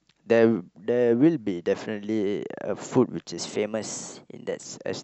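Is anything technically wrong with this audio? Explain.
Yes, there's one thing. From 3.39 to 4.65 s the speech suddenly runs 6.2% fast and jumps 104 cents sharp, about a semitone, then snaps back. That's likely a drift correction step: clock-matching software bumped the playback rate in one go to rebalance its buffer.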